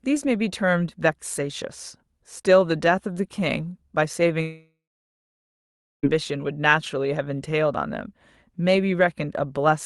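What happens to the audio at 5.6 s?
At 5.6 s the sound is inside a gap from 4.41 to 6.05 s, likely a long network dropout. The last sound is stretched into a fading buzz, then about 1.3 s of near-silence: a flat waveform and a blank spectrogram before the speech resumes.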